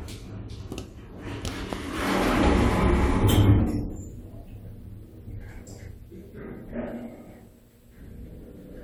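Nothing in the sound stood out as a technical problem on listening.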